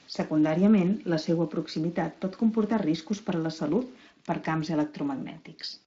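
From the start to 4.11 s, ending just before "per camps", the speech carries grainy distortion that tracks the signal. Quiet stretches turn gritty and the faintest tails sputter or drop to silence. This is low bit depth without dither, likely from truncation to around 7 bits, with an error floor roughly 30 dB below the signal. On a waveform, low-level passages show visible stair-steps. A spectrogram shows broadband grit that rises and falls with the speech, below the Speex band edge near 7.7 kHz.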